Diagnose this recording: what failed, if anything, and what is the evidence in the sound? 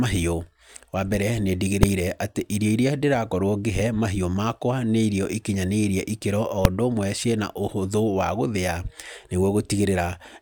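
A processing stage produced invalid numbers at full scale. Two sharp bangs cut through the speech, at 1.83 s and 6.65 s. Each lasts about 2.7 ms, which fits a 128-sample block. A calculation overflowed to infinity or an invalid value, and that whole block was pinned to maximum level.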